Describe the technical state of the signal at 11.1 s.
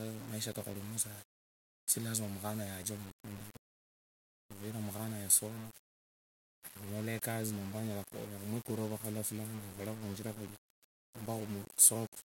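At 11.1 s the speech has the same grainy, signal-following grit that runs through the whole clip, with quiet stretches sputtering or dropping out. That's likely low bit depth without dither: about 7 bits, rounded, leaving error only around 15 dB under the speech.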